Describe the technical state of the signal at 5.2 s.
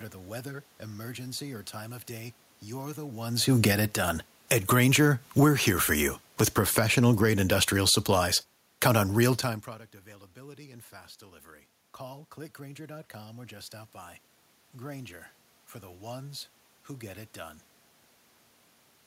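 At 5.2 s the signal is partway through an automatic gain falling fault that runs from 3.48 to 9.73 s. The gain control judged the input too loud or its background noise too strong and is steadily pulling its level down, by about 9 dB over that stretch, so the speech keeps sinking. A talker shifting position, as happens near 3.0 s and 9.5 s, changes only the voice, but here the room noise sinks right along with it.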